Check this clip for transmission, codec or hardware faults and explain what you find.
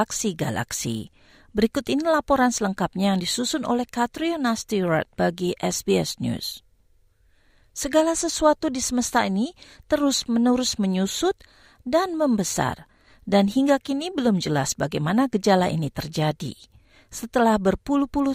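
No faults found.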